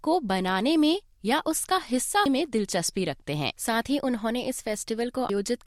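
Two brief bursts of garbled sound interrupt the audio. Both come from damaged data in a compressed stream. The first runs from 2.26 to 2.29 s. The second runs from 5.30 to 5.33 s. Each lasts about 30 ms and sounds like a short chirp or blip. Part of the encoded data there is corrupt. The decoder misreads those frames and loses sync. It then hunts for the next valid frame header before normal playback resumes.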